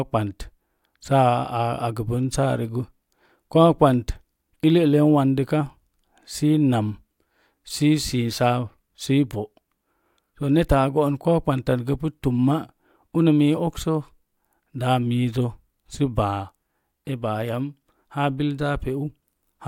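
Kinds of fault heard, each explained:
No technical faults can be heard in this recording.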